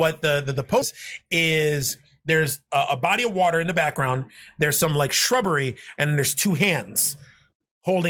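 At 0.81 to 0.83 s, just after "the the the", the speech has a skip ahead. Roughly 0.4 s of audio was thrown away, either lost in transit or discarded when an overfull jitter buffer had newer audio waiting, and playback resumed at the later material with no gap filled in. It sounds like an abrupt jump in the middle of the phrase. On a waveform the envelope changes shape instantly at the join, and a spectrogram shows formant tracks breaking off and restarting at unrelated positions.

From 2.76 to 4.14 s and again from 5.33 to 6.47 s there is a jitter buffer speed-up. The buffer was holding more delay than its target, so the receiver repeatedly cut out short pitch-period-sized slices to drain it. That removed roughly 70 ms in the first stretch and roughly 50 ms in the second, giving rates of 105% and 104%. Pitch stays the same, and the first stretch, at 105%, sounds slightly rushed. On a spectrogram the harmonic spacing is unchanged while syllables are compressed in time, and a zoomed waveform shows periodic cycles missing at the splice points.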